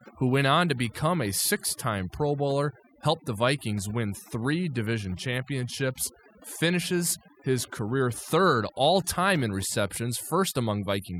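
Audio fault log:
Throughout: overdone noise removal. Noise reduction set too strong mutes frequency bands near its noise estimate, leaving twinkling near-silence between phrases and taking quiet parts of the voice with them.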